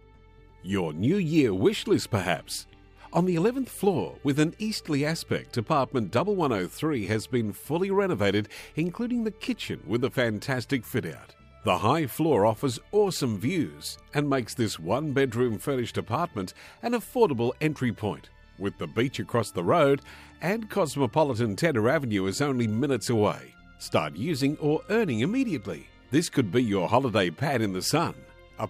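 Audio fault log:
No faults were found in the clip.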